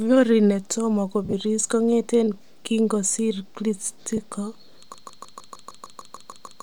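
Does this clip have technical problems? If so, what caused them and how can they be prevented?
Yes. There are two kinds of fault.

Lost LE Audio frames occur twice. The first runs from 1.25 to 1.34 s, just before "kongeten kinkosiir". About 60 ms of sound goes missing in gaps spread over 80 ms, and the longest gap is around 40 ms. A brief second dropout falls at 4.17 s and lasts about 10 ms, which fits a single lost frame. Each time, the LC3 decoder fills the hole by replaying the last spectrum with randomised phase, so the sound turns briefly into a noisy smear. Keeping the Bluetooth link strong and free of interference prevents this.

A broken-record loop starts at 4.94 s and lasts to the end. A fragment of about 153 ms plays back to back, eleven times over. The sound that should follow is lost. The likely cause is a stalled player, encoder or stream that kept resending the last buffer it held. 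A watchdog that detects stalls and mutes or resets the stream, instead of repeating old data, prevents this.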